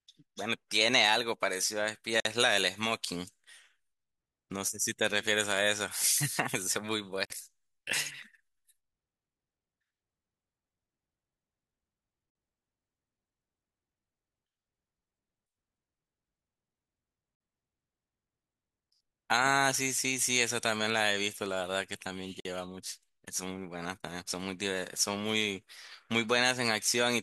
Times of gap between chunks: 2.20-2.25, 7.25-7.30, 12.30-12.35, 17.35-17.40, 22.40-22.45

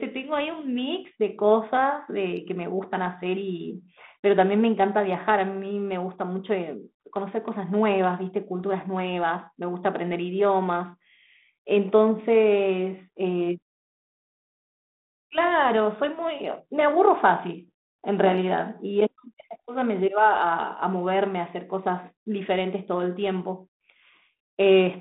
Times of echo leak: none

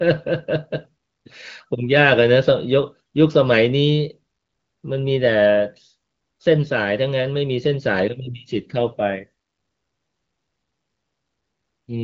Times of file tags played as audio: none

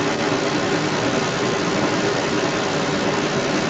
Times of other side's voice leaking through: 0.00-3.69

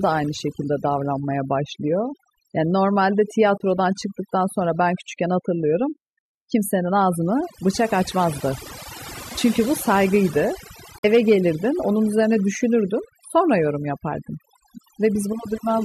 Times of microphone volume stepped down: none

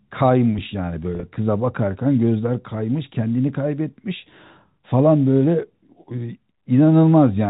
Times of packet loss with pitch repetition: 1.15-1.23

